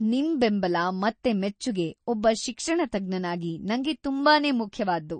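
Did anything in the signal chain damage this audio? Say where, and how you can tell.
Yes. MP3 compression damages the speech throughout at the codec stage, and the damage is plainly audible. Nothing remains above 9 kHz, so the top is sheared off at a fixed point. The remaining sound has a watery, swirling texture as weaker frequency components drop in and out between frames. This points to a bit-starved perceptual encoder, likely MP3 at a low rate that fits about 32 kbps, cutting treble and discarding detail it judged inaudible.

Pre-echo, also from the codec stage, appears at 1.23 s, just after "ನಿಮ್ ಬೆಂಬಲ", and again at 1.59 s, just before "ಒಬ್ಬ ಶಿಕ್ಷಣತಜ್ಞನಾಗಿ ನಂಗೆ". A brief hiss, about 13 ms and 11 ms long, runs ahead of each sharp onset, so the attacks sound softened. The transform block spreads quantisation noise sized for the loud attack across the whole block, including the quiet instant before the onset.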